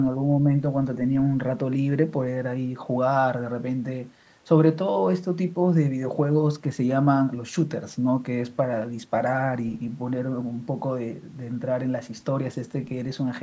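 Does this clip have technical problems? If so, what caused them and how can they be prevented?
No, this speech has no technical problems to prevent.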